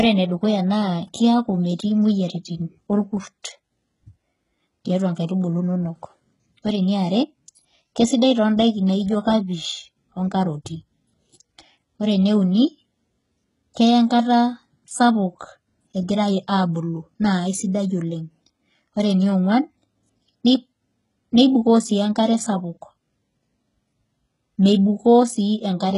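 From start to finish the speech carries heavy HE-AAC compression damage, likely from a very low-bitrate HE-AAC v2 stream around 12 kbps. The treble is rebuilt from copied lower bands and stops near 11.1 kHz. So s sounds come out gritty and lispy, with a metallic sheen.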